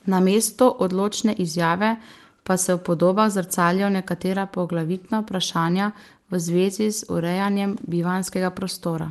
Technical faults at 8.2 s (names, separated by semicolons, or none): none